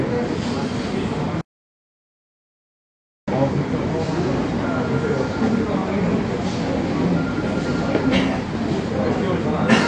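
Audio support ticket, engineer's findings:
Likely AAC compression at a low bitrate, consistent with roughly 32 kbps AAC-LC. Band-limited with nothing above 9.8 kHz, audibly dull and smeared, with fizzy warble on sustained sound throughout.

Input likely lost while the recorder kept writing zeros, causing an audio dropout to silence from 1.41 to 3.28 s. About 1.86 s is missing as dead digital silence, with no room tone.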